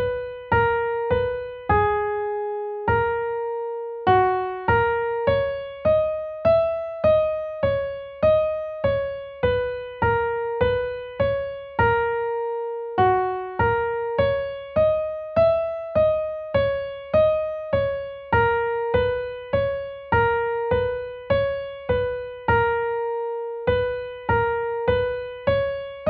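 Nothing stood out as a technical problem on listening.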